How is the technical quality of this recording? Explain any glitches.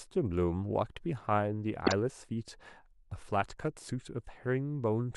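There's one glitch worth flagging in this speech recording. From about 1.87 to 1.92 s there's a corrupt frame decoded: flipped bits in a couple of compressed frames got played anyway, so misread gains and codes throw energy into the wrong frequencies, giving a short, fairly loud glitchy burst.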